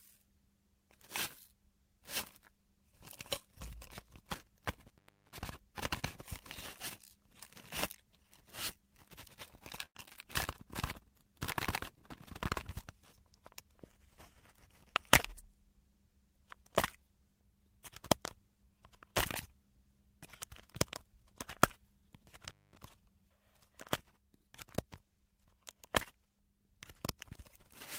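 At 4.88 s an intermittent contact interrupts the audio until 5.43 s. A loose plug or cable loses connection for about 351 ms, so the signal drops out and crackles as the contact breaks and remakes at either edge. Only faint hiss is left while the line is open. The same fault recurs from 22.48 s to 22.77 s, this time with a shorter open period of about 220 ms and the same crackle-bounded gap.

Between those, at 9.85 s to 9.97 s, there is a burst of packet loss. About 100 ms of audio never reached the receiver in time. To cover the gap, the receiver extended the last sound it had for about 95 ms and faded it out, which is heard as a held buzz or decaying hiss. Playback then picks up further along, with that stretch of the audio skipped.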